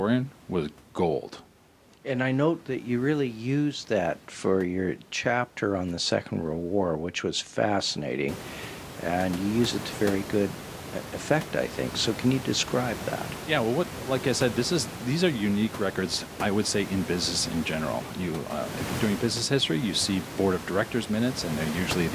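No technical faults are present.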